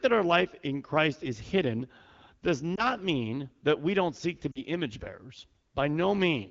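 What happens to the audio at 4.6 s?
Between about 4.52 and 4.62 s, just after "we don't seek to" and before "image bearers", the speech drops to near silence. This is lost AMR speech frames: the AMR-WB decoder bridged a roughly 40 ms gap, consistent with two 20 ms frames, by repeating the last good settings at falling gain.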